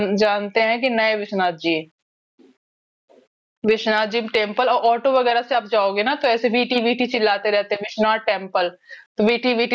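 From the start of the clip to its end, the input gain was likely set far too high for the microphone, leaving a fast limiter to haul the level down whenever the speech gets loud. The result is gain pumping: the level ducks by roughly 20 dB under each loud syllable. Loud and quiet passages sit close together, squashed flat, within the call microphone processing's band that stops near 8 kHz.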